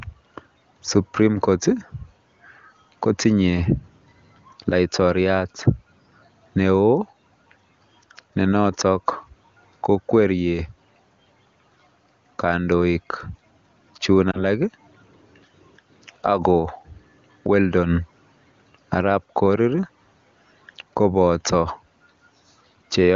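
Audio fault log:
14.31–14.43 s, lost AMR speech frames: a brief dip or warble as the AMR-WB decoder reuses the previous pitch and vocal tract settings at reduced gain, consistent with one lost 20 ms frame.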